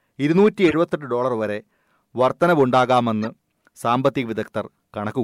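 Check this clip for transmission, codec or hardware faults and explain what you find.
The speech is interrupted twice by a corrupt frame decoded. The first runs from 0.68 to 0.74 s, the second from 3.22 to 3.26 s. Each spans a couple of frames. Flipped bits reached the decoder, which played the frames anyway. Misread gains and codes put energy at the wrong frequencies. The result is a short squeaky burst of noise. The first is loud, peaking near -10 dBFS. The second is quieter, around -20 dBFS.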